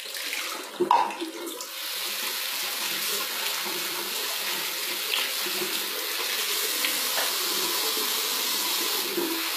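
From start to finish the treble sounds bright but synthetic, with a gritty, metallic sheen that doesn't match the fuller low and middle range, and nothing at all above 14.9 kHz. This is likely HE-AAC compression, with damage plainly audible at a rate that fits roughly 20 kbps. Only the lower spectrum is properly coded; the upper bands are rebuilt by copying lower content upward under a coarse envelope, so their harmonics fail to align with what lies below.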